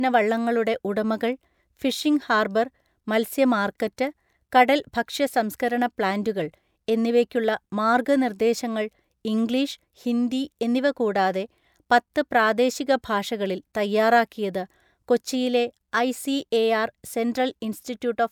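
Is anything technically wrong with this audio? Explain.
No, no technical faults heard.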